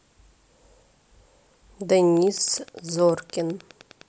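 Wi-Fi interference begins at 2.15 s and runs to the end of the speech. A nearby Wi-Fi radio's beacon, transmitted every 102.4 ms, is being rectified by the audio circuitry. This produces a steady ticking close to ten times a second, roughly 30 dB below the speech.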